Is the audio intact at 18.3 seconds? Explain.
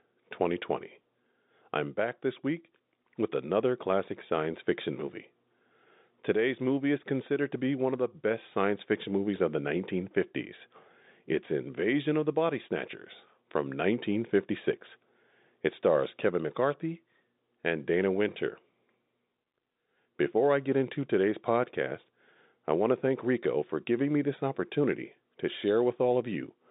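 Yes, the audio is intact at 18.3 seconds, with nothing at that moment beyond the narrow telephone band of the G.711 line it was carried on.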